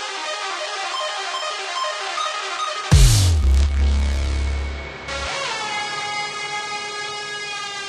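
Listening to this recording of everyday sounds, nothing stood out as a technical problem at any point.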